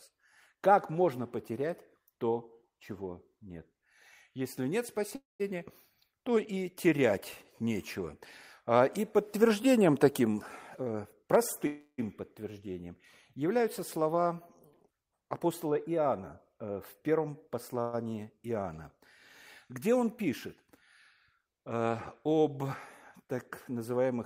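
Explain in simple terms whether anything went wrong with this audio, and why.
Three times, at 5.15 to 5.42 s, 11.67 to 12.0 s and 17.81 to 17.95 s, a call audio freeze occurs. Data was likely held up on its way, so the receiver ran dry and stretched the last sound into a fading buzz, briefly silent in the first two, then resumed without losing anything.

Jitter buffer speed-up occurs at 10.70 to 11.66 s, just after "и подтверждением таким", and again at 15.13 to 16.06 s and 16.54 to 17.74 s. With too much audio stored up, the receiver snipped out tiny slices to catch up, so the speech sounds hurried without changing pitch. It runs about 16% fast in the first stretch and about 5 to 6% fast in the other two.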